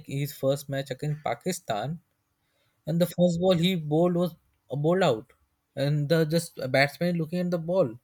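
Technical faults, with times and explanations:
No technical faults are present in this speech clip.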